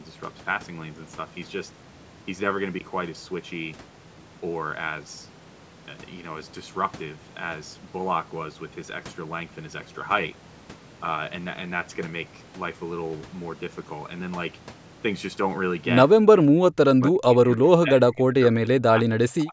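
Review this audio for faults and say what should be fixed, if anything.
The speech dips sharply from 16.21 to 16.58 s, by roughly 25 dB, then drops again from 16.74 s to the end, by around 40 dB and in pieces. This is likely speech suppressed in double talk: the echo canceller mistook near-end speech for loudspeaker echo and attenuated it. Unlike a network dropout, the sound fades and chops rather than going abruptly silent or glitching. Tuning the echo canceller's double-talk detection, or using a headset to cut loudspeaker echo, would prevent it.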